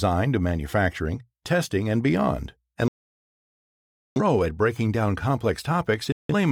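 At 2.88 s, after "manufacturing testing and beyond", the speech mutes until 4.21 s and resumes at "at breaking down", with a second short hole from 6.12 to 6.34 s. This digital broadcast dropout comes from the receiver muting on lost frames, so the programme skips ahead. The gaps are clean silence rather than the warbly, repeated fill of packet-loss concealment.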